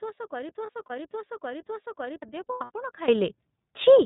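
It's a speech clip, and the whole thing has that narrowband, slightly rough and synthetic iLBC codec sound: nothing above 4 kHz, and the texture points to the 13.33 kbps mode with 30 ms frames. Right from the start the clip is already caught in a broken-record loop: a chunk of about 0.56 s repeats exactly, back to back, three times through to 2.22 s. The likely cause is a stalled stream that kept resending its last fragment, so whatever should have played there is gone. On top of that there are two patches of lost iLBC frames, where the decoder fills the gaps with a held, slightly buzzy vowel-like tone. From 0.66 to 0.90 s about 90 ms goes missing in short 30 ms bites. From 2.47 to 2.71 s it's worse, about 180 ms lost, the longest stretch roughly a tenth of a second. Each time the voice snaps back almost immediately because the frames stand alone. Finally, at 3.08 s there's a sudden gain jump of about 16 dB. 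The speech and the background noise leap up together and stay there to the end, which is likely a digital gain change applied with no ramp.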